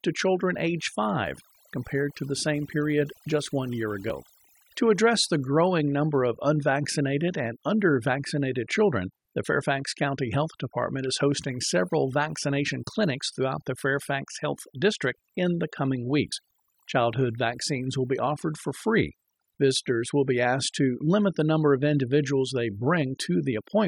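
Throughout the clip, overdone noise removal has a noise reduction stage set far too strong, pulling individual frequency bands down or out wherever they sit near its noise estimate. The background drops and breaks up into twinkling specks, and the quieter parts of the speech are stripped away with the noise.

At 4.10 s, just after "period just one year", at 12.67 s, between "is hosting several" and "clinics throughout the", and at 16.31 s, just after "in the coming", there is damaged data in a compressed stream. Corrupted bytes make the decoder misread frames and lose sync until it finds the next header, and each spot comes through as a brief chirp or blip lasting under 20 ms.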